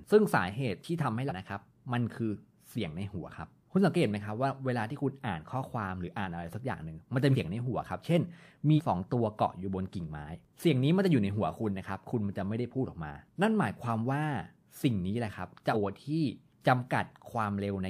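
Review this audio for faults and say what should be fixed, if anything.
Compressed frames skipped at 1.28–1.32, 7.32–7.36, 8.76–8.80 and 15.72–15.75 s. The sound jumps ahead by roughly 0.7, 0.15, 0.3 and 0.4 s. Whole frames are missing from the file or refused by the decoder as damaged, so playback skips past them. Re-encode from an intact source and verify file integrity.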